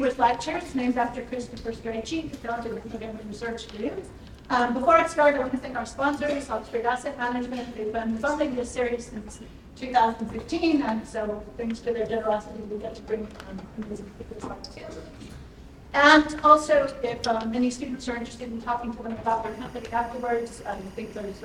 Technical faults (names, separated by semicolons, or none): timecode bleed